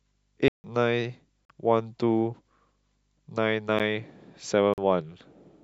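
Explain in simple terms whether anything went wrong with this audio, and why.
The speech drops out three times, plus one tiny tick. This is a block of digital silence: the audio is replaced by nothing. Gaps come at 0.48 s (0.16 s long), 1.45 s, 3.79 s (very brief) and 4.74 s. Two gaps match a 2048-sample buffer, likely one that wasn't filled in time.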